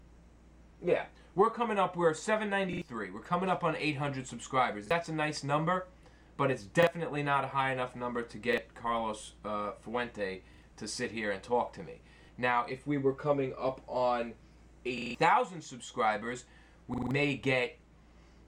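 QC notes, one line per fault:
2.73, 4.86, 6.83, 8.53, 10.54, 12.25, 14.98, 16.94 s: repeated buffer. Audio arrived late, so the same 43 ms chunk (fits a 2048-sample buffer) replays with hard joins, heard as stutters. The ones at 14.98 and 16.94 s loop four extra times.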